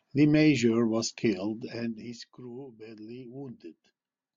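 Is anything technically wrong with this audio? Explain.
No, nothing is technically wrong.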